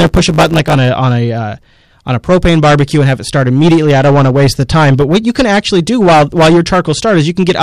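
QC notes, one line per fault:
Throughout, hard clipping: every louder syllable carries a harsh, gritty fuzz, with crackle on the strongest peaks. The speech is driven about 12 dB past what the signal path can carry, so roughly a tenth of the samples hit the ceiling and are sliced flat. Those squared-off tops generate a spray of high harmonics that were never in the voice, which is why the distortion sounds bright and raspy rather than simply loud.
0.0–0.75 s, block size mismatch (truncated): the opening is overlaid with a steady 100 Hz buzz and runs slightly rushed, about 1.07 times normal speed, yet the timbre stays the same. The stage writing the audio sends longer blocks than the next one reads, consistent with 512-sample writes, and the tail of each block is discarded. The regular gaps repeat at 100 per second to form the buzz, and the lost material shortens time without transposing. 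It clears just before "a on a uh".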